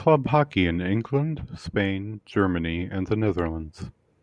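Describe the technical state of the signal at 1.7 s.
At 1.7 s the speech signal is intact, with no audible technical fault at that moment.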